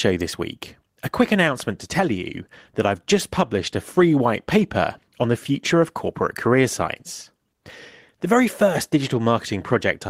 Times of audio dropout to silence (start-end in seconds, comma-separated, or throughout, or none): none